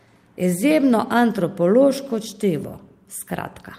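No technical faults can be heard anywhere in the speech. There are no events to place in time.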